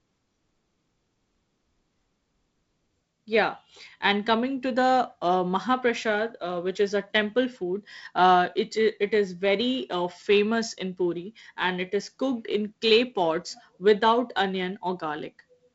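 No technical faults can be heard in this speech.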